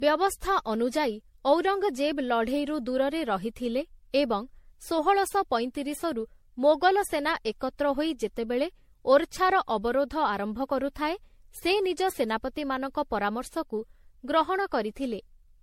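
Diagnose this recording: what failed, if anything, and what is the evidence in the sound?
The codec stage failed: throughout the speech the sound is swirly, hollow and smeared, with blurred attacks and nothing above 16.5 kHz. That fits MP3 near 64 kbit/s, likely generation loss from about ten re-encodes, each adding noise. One encode would not sound this degraded.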